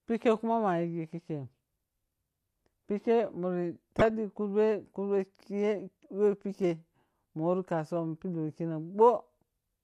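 At 3.99 to 4.10 s and again at 8.95 to 9.10 s the speech is overlaid with DAB burbling, brief bursts of burbling noise blips. Weak reception let bit errors slip past error correction into the MP2 data, so corrupted samples put short noise blips in single sub-bands. The first burst is denser, fitting several damaged frames and a higher error rate. The second is sparser, pointing to a lighter error rate.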